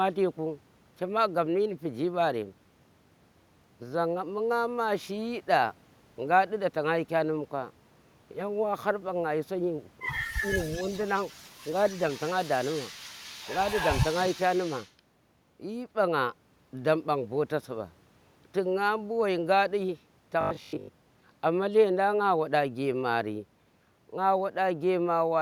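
From 10.6 to 11.5 s a faint delayed copy of the speech trails the original by about 230 ms, sitting roughly 20 dB below it. This is an echo leak. The likely cause is a far end playing the call over a loudspeaker whose echo canceller let part of the microphone pickup pass and sent it back. Inside that stretch, from 10.80 to 10.86 s, the speech dips by a few decibels for about 50 ms. This is speech suppressed in double talk. While the echo overlaps the talker, the canceller likely cannot tell the two apart and pulls both down briefly.

The echo leak returns from 11.72 to 14.93 s, again about 230 ms behind the speech. Here it is much stronger, around 10 dB below the direct sound, forming a second, lagging layer across more than three seconds. The cause is likely the same residual loudspeaker echo getting past the canceller, now with less of it removed.

From 20.41 to 21.23 s the speech turns into a rigid, metallic buzz at 50 Hz that only loosely follows the original contour. 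This is robotic sound from repeated short buffers. Audio likely arrived too seldom, so the playback repeated the last 20 ms, which fits a 20 ms buffer, over and over in place of the missing material. Roughly two thirds or more of the stretch is repeated rather than real.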